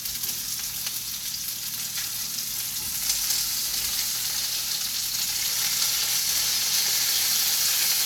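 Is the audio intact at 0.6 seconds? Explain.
Yes, at 0.6 seconds the audio is intact, with no audible fault at that moment.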